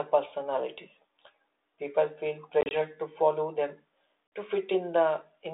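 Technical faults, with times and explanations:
2.61–2.74 s and 4.27–4.32 s, packet loss on an ADPCM call: about 60 ms (gaps up to 30 ms, before "to follow") and 50 ms of packets drop out as hard-edged silence. The decoder's predictor and step size desynchronise, so the sound resumes mismatched until they resettle.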